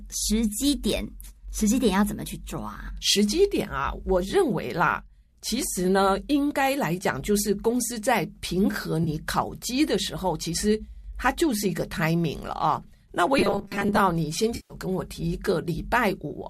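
AAC frame loss with concealment at 9.04 to 9.09 s: about 30 ms of the low-delay AAC stream went missing, and the decoder patched the gap from the previous spectrum, leaving a brief smeared, noisy blip.

Robotic sound from repeated short buffers, 13.39 to 14.00 s: the audio turns into a rigid metallic buzz fixed at 200 Hz, likely from a 5 ms buffer replayed while most real audio was skipped.

AAC frame loss with concealment again at 14.56 to 14.74 s: 140 ms are lost this time, so the concealed spectrum smears and thins before normal sound returns.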